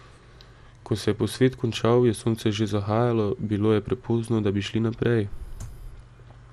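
The speech sounds dull and gurgling throughout. Nothing is heard above 13.6 kHz. Likely MP2 compression is starving upper bands of bits, fitting 80 kbps.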